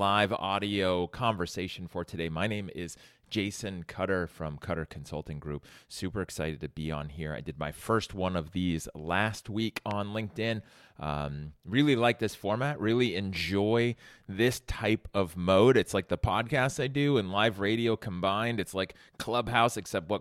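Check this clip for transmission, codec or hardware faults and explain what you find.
One fault: a loud pop at 9.91–9.93 s, a single sharp thump around 10 dB above the sound, likely a voltage spike from static or switching. Unlike a dropout, the sound continues underneath.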